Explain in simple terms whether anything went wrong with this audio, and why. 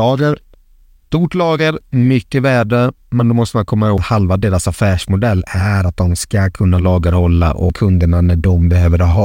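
Two CD skips, at 3.97 s and 7.69 s: the laser jumped to another turn of the disc's spiral, so the speech ticks, drops out for a split second, and resumes elsewhere.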